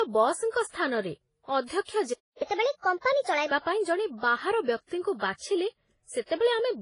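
Throughout, nothing sounds above 10.6 kHz, and several kinds of smearing and swirl overlap. This likely comes from transcoding between lossy codecs, ending in a low-rate Vorbis stage.

At 2.13 s the speech cuts off mid-flow and stays silent until 2.42 s, about 0.27 s. A playback stall, with the player likely starved of data, fits this gap.

From 2.42 to 3.51 s the speech runs 1.25 times fast and sounds about four semitones sharp. This is catch-up at higher speed, recovering lost time before normal playback resumes.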